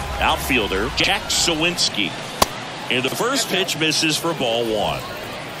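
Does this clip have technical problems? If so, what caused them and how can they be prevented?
Yes. There are chunks out of order at 1.00 to 1.08 s and again at 3.08 to 3.16 s. In each case a 40 ms block of audio was delivered or written one chunk late, so it plays after the block that should follow it. Nothing goes missing, but the swapped pair creates three abrupt joins, heard as a brief jumbled stutter. Prevention: sequence-number each chunk and reorder in a jitter buffer before playback or writing.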